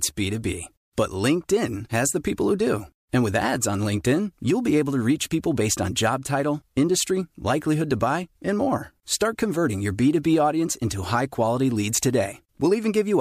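No technical faults can be heard anywhere in the speech recording. Nothing in the signal chain draws attention to itself at any point.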